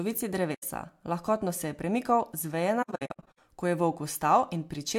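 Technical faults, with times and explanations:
0.54–0.63 s: AAC frame loss with muting. The speech drops into a soft-edged silence of about 85 ms, which fits roughly four lost frames. The decoder zeroes the missing spectra, and the overlapping transform windows fade the sound out and back in.
2.82–3.38 s: AAC frame loss with muting. Short muted gaps are scattered across about 0.55 s, totalling about 0.36 s, the longest around 70 ms. Each gap is faded at its edges by the same window overlap.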